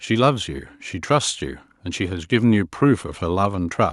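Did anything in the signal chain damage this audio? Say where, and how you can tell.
No, nothing damaged this audio.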